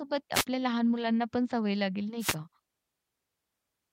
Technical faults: wireless microphone noise hit

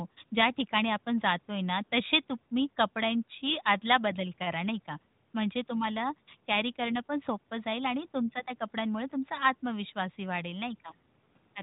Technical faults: none

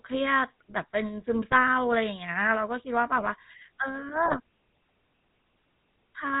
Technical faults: GSM full-rate codec; GSM bit errors

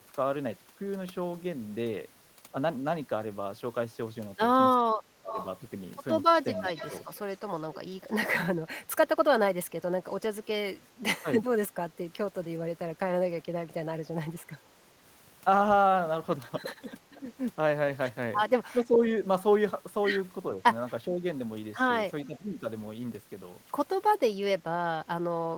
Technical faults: speech suppressed in double talk; echo leak

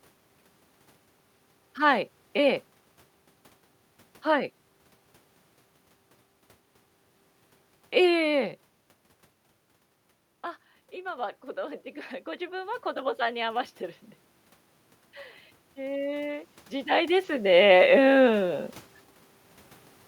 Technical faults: automatic gain rising

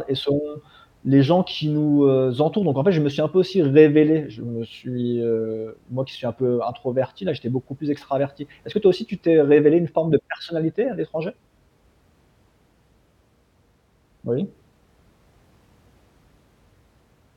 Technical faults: none

